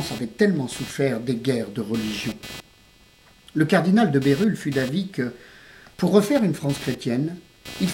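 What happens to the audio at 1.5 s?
At 1.5 s the audio carries computer activity noise, which runs through the whole clip rather than starting there. Shifting load on the processor, graphics card or mouse disturbs the ground that the audio circuit shares with the computer, and that fluctuation leaks into the signal. It sounds like a buzzing, chirping texture pulsing at around 300 Hz, roughly 20 dB below the wanted sound, rising and falling with the machine's activity rather than with the audio.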